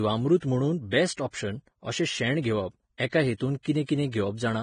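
Heavy Vorbis compression, likely the cause, runs throughout the speech: nothing survives above 9.7 kHz, and the remaining treble is quantised so coarsely that its detail turns into grainy hiss, roughening voiced tones and smearing consonant onsets, consistent with a bitrate near 23 kbps.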